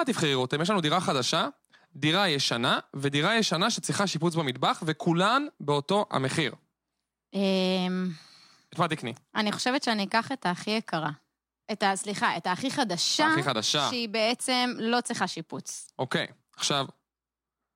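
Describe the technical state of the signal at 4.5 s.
A single sharp tick at 4.49 s, broadband and unrelated to the speech: a bit error spike, one flipped bit jumping one sample to about -17 dBFS.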